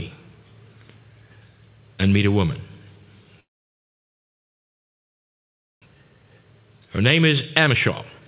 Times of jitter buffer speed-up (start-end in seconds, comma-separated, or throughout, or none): 5.95-8.28